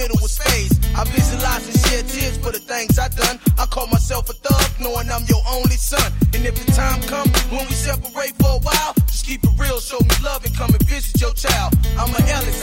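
No technical faults are audible anywhere in the audio.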